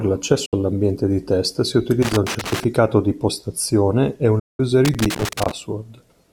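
At 0.46 s the receiver loses a digital broadcast dropout's worth of frames and mutes. The speech fades out over about 8 ms and leaves a 64 ms hole, which fits two 32 ms frames, just before "all'ambiente di test si". From 2.02 to 2.64 s, between "all'ambiente di test si" and "di postazione e", a loose connector crackle appears as a worn contact makes and breaks, chopping the signal into irregular scratchy bursts. After "di postazione e", a second dropout mutes 4.39 to 4.60 s, a 192 ms gap that fits six lost frames. The crackle returns from 4.85 to 5.51 s.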